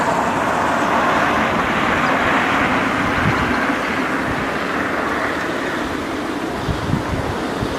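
No technical faults are audible.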